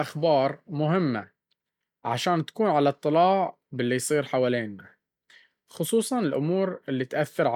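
No faults detected in this speech recording; nothing audible to flag at any point.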